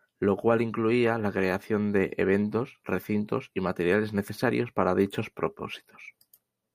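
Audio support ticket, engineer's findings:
No audible faults found.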